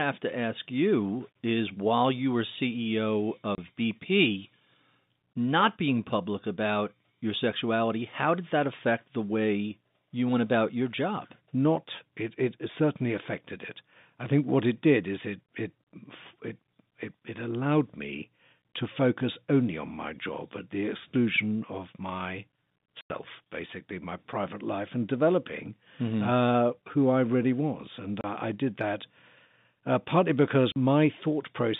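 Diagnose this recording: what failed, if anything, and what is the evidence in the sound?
At the network stage, packets were lost and the receiver filled the gaps with silence. The speech drops out abruptly at 3.55, 23.01, 28.21 and 30.72 s, for 30, 90, 30 and 40 ms, with hard edges. These lengths fit 10 ms packets.

A driver or buffer underrun left a block of digital silence. There is a single tick at 14.26 s, a 2.9 ms hole with no fade, consistent with one unfilled 128-sample buffer. Under both faults, the G.711 telephone coding band runs from 150 Hz to 3.7 kHz.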